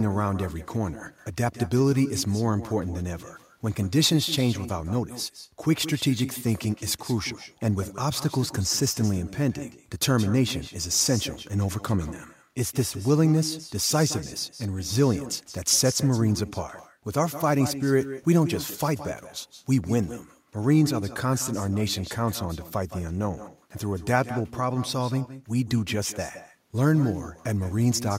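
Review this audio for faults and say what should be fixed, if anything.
Throughout the clip, every phrase is trailed by a quieter, thinner copy arriving roughly 150 ms later and sitting about 14 dB below the speech. This is echo with no canceller: the far end's loudspeaker feeds its microphone, and the returned sound comes back after the network round trip. Enabling acoustic echo cancellation at the far end, or having that participant use a headset, would stop the loop.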